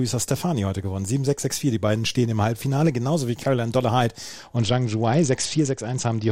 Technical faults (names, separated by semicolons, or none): Bluetooth SBC bit pool drop